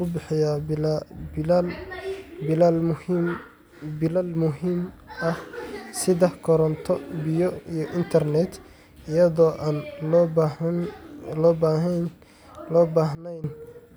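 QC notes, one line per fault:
4.08–4.35 s and 13.15–13.44 s, sudden gain jump: the speech and its background noise drop together, by about 6 dB just before "muhiim ah" and by about 18 dB near the end, likely from a digital gain change applied between adjacent samples with no ramp.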